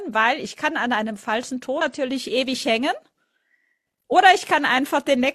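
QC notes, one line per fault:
1.77–1.82 s, damaged data in a compressed stream: corrupted bytes make the decoder misread frames and resync, producing a brief glitch in the speech.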